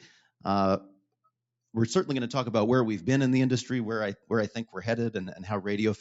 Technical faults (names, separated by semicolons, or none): noise suppressor applied to music or sounds; clock drift between sender and receiver; repeated timing corrections